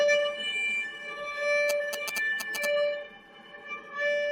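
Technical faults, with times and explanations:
Throughout, noise suppressor applied to music or sounds: a speech-tuned suppressor treats steady parts as noise, swinging the level by roughly 10 dB, so held sound pumps and thins.
0.89 to 1.15 s, sound cut by the noise suppressor: the suppressor mistook this stretch for noise and pulled it down by up to about 6 dB.
1.69 to 2.65 s, GSM signalling bursts: a nearby 2G phone's radio bursts get rectified in the audio circuit, giving a galloping tick pattern with 217 Hz buzz at roughly signal level.
3.05 to 3.93 s, sound cut by the noise suppressor: the suppressor mistook this stretch for noise and pulled it down by up to about 6 dB.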